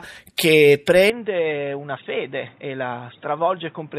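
Speech clip in which, from 1.10 s to the end, the sound abruptly narrows and turns boxy, with nothing above 3.8 kHz, a level drop of roughly 10 dB, and a new noise floor about 30 dB below the signal, with no gap at the change. The likely cause is an input switched to a poorer device.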